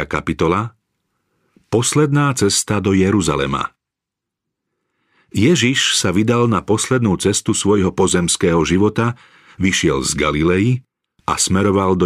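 A recording of speech, with nothing technically wrong to point to anywhere in it. No fault turns up at any moment, so there are no times or causes to give.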